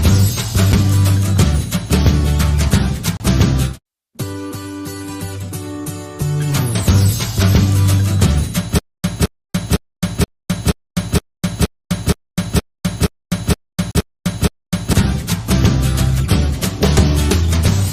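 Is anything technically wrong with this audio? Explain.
Yes. Four blocks of digital silence, a stutter with silent gaps and a short stall from a late packet can be heard.

Blocks of digital silence occur at 0.72 s, 3.17 to 3.20 s, 10.24 to 10.28 s and 13.91 to 13.95 s. When an output buffer goes unfilled or a calculation fails, zeros replace the sound. The 7 ms gap at 0.72 s registers as a tick or dip. The others, 30 to 40 ms long, are short holes that cut in and out with no fade.

A stutter with silent gaps runs from 8.79 to 14.93 s, likely from a stalled player or stream replaying its last fragment on each retry. A 216 ms burst repeats 13 times every 470 ms, each followed by about 254 ms of silence. The audio due in that span is lost.

A short stall from a late packet occurs from 9.49 to 9.56 s. With the packet late and the jitter buffer empty, the last sound was stretched for 35 ms, then playback resumed where it stopped. 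Nothing is missing, but the sound is held too long.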